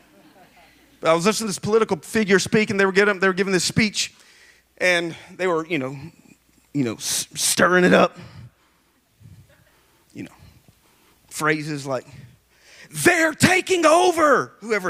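No technical faults can be heard anywhere in the recording. Nothing in it calls for a timestamp or a closer listen.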